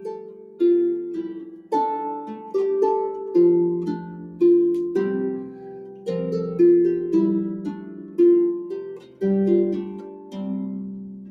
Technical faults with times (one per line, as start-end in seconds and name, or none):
0.00-11.30 noise suppressor applied to music or sounds
0.00-0.60 sound cut by the noise suppressor
1.52-1.72 sound cut by the noise suppressor
5.46-6.07 sound cut by the noise suppressor
7.69-8.19 sound cut by the noise suppressor
8.64-9.22 sound cut by the noise suppressor
9.82-10.37 sound cut by the noise suppressor
10.99-11.30 sound cut by the noise suppressor